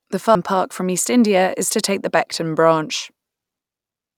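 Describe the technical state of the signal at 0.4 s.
Right around there, at 0.35 s, the speech jumps forward because compressed frames were skipped. Roughly ten whole frames never got played, either missing from the stream or thrown out by the decoder as damaged. With frames of 92.9 ms each, that's around 0.7 s of audio just gone. By 0.4 s you're already past the gap.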